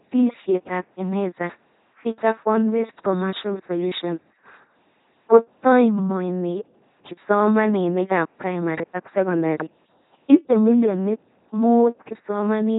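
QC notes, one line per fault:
Throughout: LPC-10 vocoder. The speech is a buzzing, mechanical robot voice. Each frame is resynthesised from a ten-pole filter driven by either a pulse train or noise, with no mixed excitation, and nothing above 3.9 kHz survives, which fits a 2.4 kbit/s coder.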